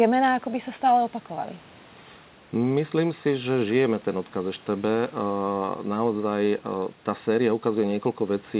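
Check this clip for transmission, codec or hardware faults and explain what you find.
No transmission, codec or hardware faults can be heard in this speech clip. Room noise sits about 30 dB below the speech, and the call path's narrowband codec leaves nothing above 4 kHz, which fits G.711 mu-law at 64 kbps.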